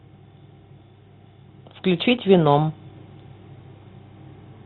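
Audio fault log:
Throughout: Bluetooth CVSD headset codec. The speech is band-limited, with nothing above 4 kHz, which fits the narrowband 64 kbit/s CVSD headset link. Its one-bit delta modulation cannot keep up with loud high-frequency content, so sibilants turn scratchy and a granular hiss sits beneath the speech.
1.84–2.84 s: Automatic gain rising. Over about one second the level climbs by about 4 dB as the gain control reacts to input it judged too quiet. Speech and background noise swell together because the same gain applies to everything.
2.17 s: Unconcealed Bluetooth headset packet loss. A 7.5 ms hole with hard edges appears, consistent with a couple of dropped voice packets replaced by silence rather than patched over. The speech returns briefly quieter as the CVSD step size rebuilds.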